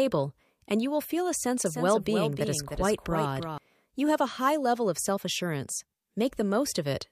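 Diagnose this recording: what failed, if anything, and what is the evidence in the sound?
A doubled audio track appears from 1.66 s to 3.58 s, right after "will feel a sense": a full-band copy trails by roughly 300 ms, about 5 dB down, dry, starting and stopping abruptly. The cause is likely a second, slower capture path in the driver or buffer routing.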